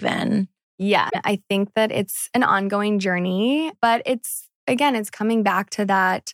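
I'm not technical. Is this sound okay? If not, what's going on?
No. At about 1.06 to 1.16 s, just before "I think that it's", there is a brief glitch. That's damaged data in a compressed stream: the player hit garbled bytes and skipped to the next readable chunk.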